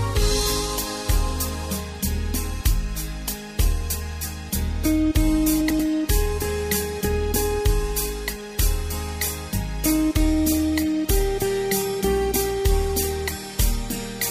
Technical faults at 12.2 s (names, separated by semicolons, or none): none